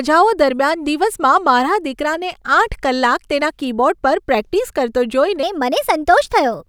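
Playback likely switched to the wrong clock at 5.43 s, right after "પર પ્રેક્ટિસ કરતો", so the final stretch of the speech runs at 1.19 times its recorded speed through to the end. That is a section at the wrong speed: because timing and pitch are tied together, the voice abruptly turns hurried and rises by roughly three semitones, sounding thinner and slightly chipmunk-like against the natural pacing before the jump.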